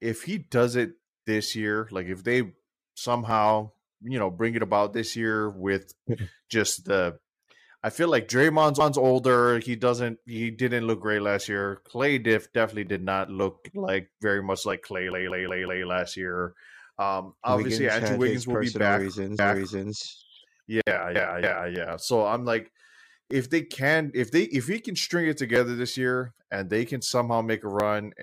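Speech here, with two separate problems. First, there's a regular click about every 2.25 s, from around 1.06 s right through to 27.8 s, roughly ten of them. That steady spacing is the signature of clock drift buffer slips. Two devices are likely running on independent clocks about 500 ppm apart, so a buffer creeps full or empty and then drops or repeats a small chunk of samples, on the order of fifty, each time it slips. Second, there are four stutters from repeated frames, where a block of the compressed stream gets played again. At 8.80 s a 0.19 s block plays twice, adding about 0.19 s. At 15.12 s another 0.19 s block loops four extra times, so it sounds like a skipping record for about 0.74 s. At 19.39 s a longer 0.56 s block repeats once. At 21.16 s a 0.28 s block plays twice more, adding 0.56 s.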